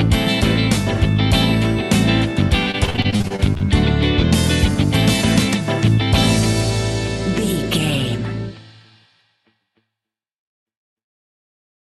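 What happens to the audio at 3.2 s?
At 3.2 s the audio is in a stretch of repeated packet loss (robotic sound) running from 2.71 to 3.63 s. Short holes, up to 48 ms, are each patched by extending the preceding sound and then quickly followed by another, giving a choppy texture rather than one clean dropout.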